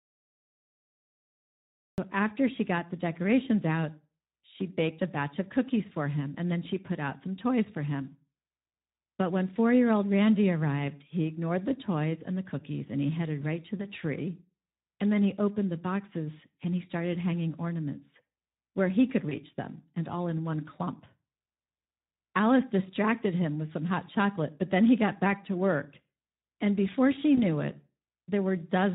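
Speech clip with Speex codec damage throughout. The voice sounds noisy and hoarse, which fits a Speex stream at around 11 kbps. It opens with a cut-off start: digital silence until 1.98 s, then sound begins abruptly mid-utterance with no natural attack. VoIP packet loss concealed by the speech codec occurs at 13.77 s, 19.29 s and 27.35 s. Each time a single 20 ms frame is lost. The decoder extends the previous sound into a brief, fading smear, and the voice stays weakened for up to about 0.1 s afterward.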